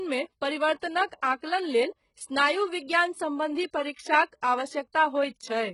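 The treble of this speech sounds bright but false throughout: s sounds come out gritty and lispy, with a metallic sheen, and nothing is present above about 11.1 kHz. This is likely HE-AAC compression under heavy strain, at a rate that points to roughly 12 kbps. The codec keeps only the lower spectrum and fakes the top by copying lower bands upward under a coarse envelope, so the upper harmonics no longer line up with the real ones below the crossover.

Three short bursts of hiss come just ahead of sharp onsets, making each attack sound soft and smeared. The first runs from 1.07 to 1.12 s, about 48 ms; the second is a brief one at 1.21 s, about 13 ms; the third runs from 1.36 to 1.42 s, about 58 ms. This is pre-echo. The transform codec spreads quantisation noise sized for the loud attack across its whole block, so the quiet moment before each onset fills with noise.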